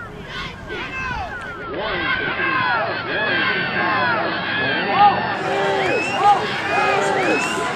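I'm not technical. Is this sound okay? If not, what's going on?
No. Two things are going on.

The first is a doubled audio track, running through the whole clip: a second copy of the same sound plays about a second and a half behind the first, at roughly the same loudness. It is not an ordinary echo. Echoes and room sound fade away and sound softer or more distant, but this copy doesn't fade and has no roominess. It's most likely two recordings of the same thing mixed together out of step.

The second is digital radio blending to analogue, from 1.52 s to 5.47 s. The radio lost its clean digital signal and switched to the older AM broadcast of the same station, then switched back. The change-over is quick, about a sixth of a second each way. During that stretch a faint background hiss appears, the sound becomes duller and more muffled because the top end is missing, and the loudness shifts very slightly. 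Unlike the doubling, this affects only that window, and it's recognisable by the hiss and muffled quality.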